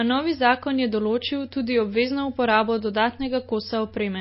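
Throughout, the speech sounds watery, with nothing above 5.6 kHz. This is likely MP3 compression, starved of bits, which fits a low bitrate near 24 kbps.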